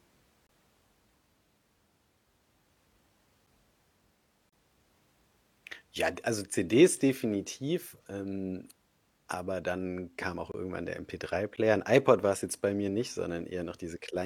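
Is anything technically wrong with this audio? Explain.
Yes. There are five gaps between stream segments: 0.47–0.49 s, 3.46 s, 4.49–4.53 s, 10.52–10.54 s (between "aber dann kam auch" and "irgendwann der"), and 11.56 s. Misaligned timestamps at 1.0 s segment boundaries are filled with silence, producing hard-edged dropouts of about 8 to 32 ms without losing any audio.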